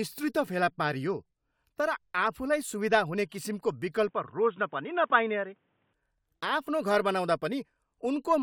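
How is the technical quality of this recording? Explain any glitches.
The recording has one fault. From 4.09 to 5.93 s the speech narrows to nothing above 3.8 kHz, sounding dull and boxy, with faint new background noise and no gap or level jump; this is likely an input switched to a poorer, narrower-band device, then back.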